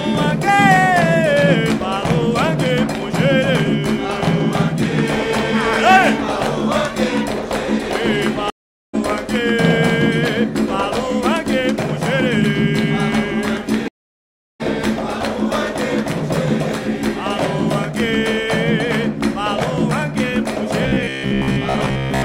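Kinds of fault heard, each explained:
Stream reconnect: The connection dropped, playback went quiet, and the player reconnected and spun up a fresh decoder partway through. It happens twice here. At 8.5 s there's a gap of about 0.43 s, and the sound picks up roughly 0.3 s further on than where it stopped. At 13.88 s the silence lasts about 0.72 s, and it rejoins around 0.7 s later, so that stretch is simply lost.
Robotic sound from repeated short buffers: From 20.83 s to the end, the sound turns into a stiff, metallic buzz pitched at about 66.7 Hz that still loosely tracks the underlying audio. The likely cause is fresh audio arriving too slowly, so the player keeps looping its last snippet while the real material is skipped. The buzz frequency points to roughly 15 ms chunks, and most of that final stretch seems to be repeats.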